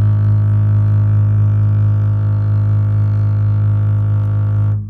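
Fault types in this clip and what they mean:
No faults in this music.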